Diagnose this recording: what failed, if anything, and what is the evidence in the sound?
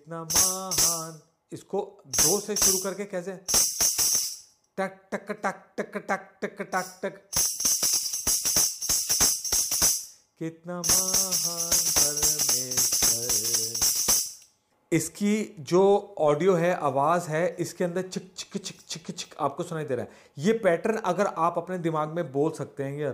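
Nothing failed in this recording, and the sound gives no evidence of any fault.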